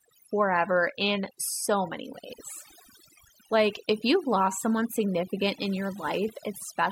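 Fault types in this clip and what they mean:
Overdone noise removal: A noise reduction stage was driven far too hard on this speech, so it pulls individual frequency bands down or off whenever they sit near its noise estimate, and softer parts of the voice are cut along with the noise. Through the whole clip the background collapses to near silence with twinkling specks. A spectrogram would show an unnaturally dark floor scattered with isolated bright dots, and speech harmonics that look ragged and broken.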